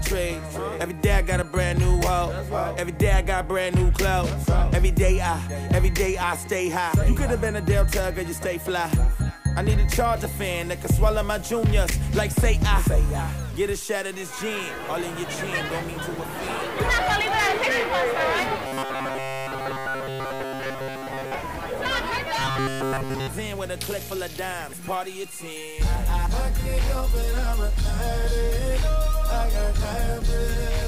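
From 10.16 s to the end, the audio has grainy distortion that tracks the signal, with quiet passages turning gritty and the error sitting roughly 25 dB below the signal. This is low bit depth without dither, likely undithered truncation to about 6 bits. Robotic sound from repeated short buffers appears at 18.67–21.34 s and 22.39–23.27 s as a rigid metallic buzz at 133 Hz. The likely cause is a roughly 7.5 ms buffer being replayed in place of fresh audio, covering most of the first stretch and all of the second.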